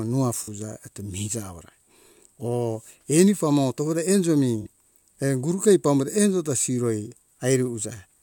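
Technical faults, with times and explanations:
0.43–0.48 s and 4.61–4.67 s, AAC frame loss with concealment: each time the speech briefly turns smeared and noisy, with a hollow, phasey quality lasting about 43 ms, which fits two missing AAC frames. The decoder had nothing to play for that stretch, so it rebuilt the gap from the last good spectrum. That keeps the energy going but loses the true detail and phase, and the result is a blurred patch rather than silence.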